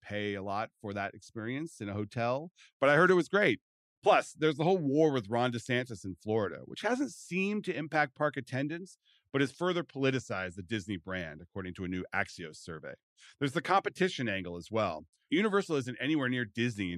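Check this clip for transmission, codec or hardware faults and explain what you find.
No faults turn up anywhere in the speech. There is nothing to report or explain.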